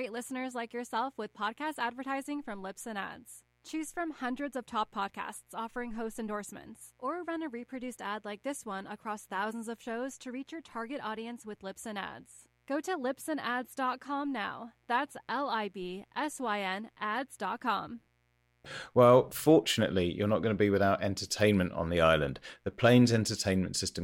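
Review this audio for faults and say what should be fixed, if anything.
A mains buzz runs through the whole speech clip. It is a steady, raspy tone built on 60 Hz, with harmonics climbing into the kHz range. Sharp interference spikes twice per cycle cause it. It sits roughly 40 dB under the speech. Shielded cabling and distance from dimmers would prevent it.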